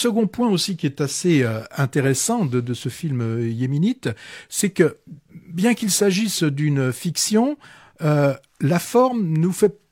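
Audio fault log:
Nothing stood out on listening to the speech in this recording.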